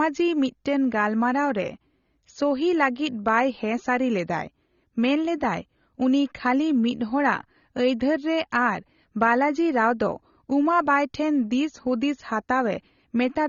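From start to finish the speech is band-limited, with nothing above 6.9 kHz, and sounds dull and smeared with a fizzy, warbling edge on sibilants. This is likely AAC compression at a low bitrate, near 24 kbps, lowering its cut-off and coarsely quantising the remaining spectrum.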